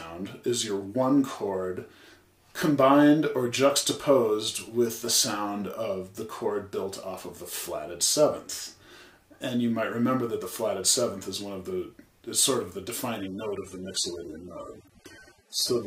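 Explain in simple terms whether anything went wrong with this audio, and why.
An adaptive stream at a lower bitrate takes over from 13.2 s to the end. The connection slowed, so the player switched to a smaller, cheaper version of the stream. The sound abruptly loses its crisp top end and turns smeared, with no gap at the switch.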